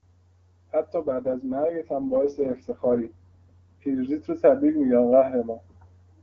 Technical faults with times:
1.03-3.97 AMR rate drop

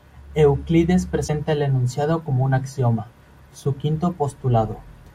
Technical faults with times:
1.27-1.30 broken MP3 bit reservoir

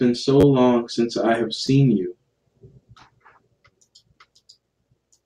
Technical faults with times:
0.41-0.44 repeated buffer
1.67 repeated buffer

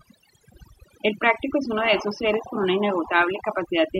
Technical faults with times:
0.00-4.00 overdone noise removal

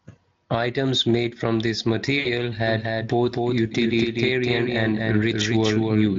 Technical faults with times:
2.19-2.29 VoIP packet loss concealed by the speech codec
2.67-6.19 doubled audio track

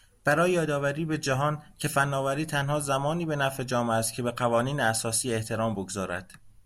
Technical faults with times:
none

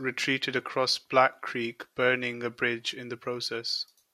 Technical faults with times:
none

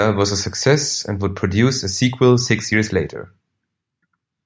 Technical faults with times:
none

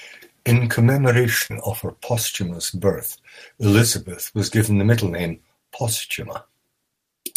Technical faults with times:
1.46-1.51 short concealed packet loss

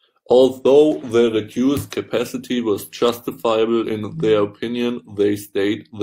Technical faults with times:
none

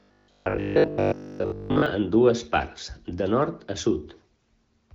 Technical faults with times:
0.02-1.86 robotic sound from repeated short buffers

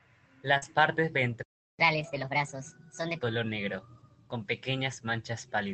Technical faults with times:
0.57-0.64 short concealed packet loss
0.62-0.64 lost packet rebuilt from error correction
1.43-1.79 playback stall
1.79-3.23 catch-up at higher speed
1.96-2.30 lost packet rebuilt from error correction

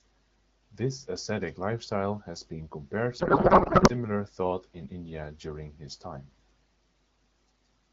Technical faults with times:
3.19-3.91 codec payload misread

